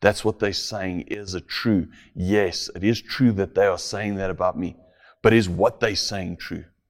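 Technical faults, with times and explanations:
1.14–1.28 s, sudden gain jump: speech and background noise drop together by about 11 dB, then recover, likely a gain change applied instantly without a ramp.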